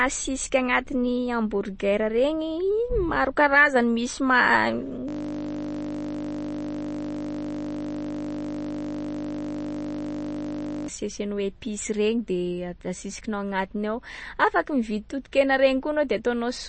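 Speech runs through plainly audible lossy coding for its whole length: the band stops dead at about 8.3 kHz, and the remaining top end swirls and chirps as weak frequency lines drop in and out between frames. That is likely MP3 compression, with the damage pointing to a low bitrate of around 32 kbps. From 5.09 s to 10.88 s the sound is replaced by a system hang loop. A single 20 ms slice, which fits a 20 ms ring buffer, repeats hundreds of times while the host is frozen, producing a steady 50 Hz buzz instead of speech.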